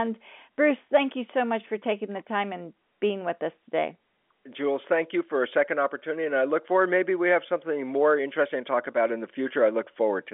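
Nothing stood out on listening to this telephone-band speech, which sits within the usual line range of roughly 200 Hz to 3.5 kHz.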